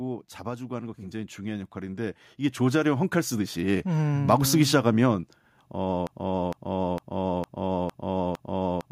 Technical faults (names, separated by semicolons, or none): automatic gain rising; broken-record loop